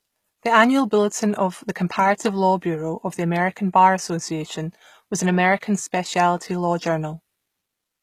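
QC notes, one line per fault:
throughout: HE-AAC compression. The treble is bright but synthetic, with gritty, lispy s sounds. This is likely band replication at a low bitrate, fitting roughly 20 kbps.
5.61 s: pre-echo. A brief hiss leads a sharp attack by about 17 ms and smears it. Block-wide quantisation noise fills the quiet moment before the onset.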